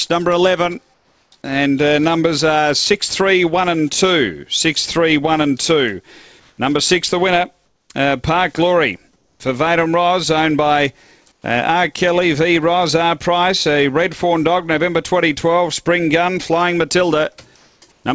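At 0.94–1.32, 6.40–6.58, 7.66–7.90, 9.16–9.40, 11.32–11.44, 17.56–17.82 and 17.92–18.04 s, the pauses carry comfort noise in place of the background, likely from discontinuous transmission. It is a smooth, featureless hiss, mostly about 4 to 9 dB quieter, rather than the silence a gate or dropout leaves.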